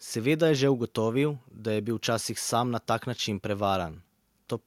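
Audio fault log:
No faults heard anywhere in this speech recording.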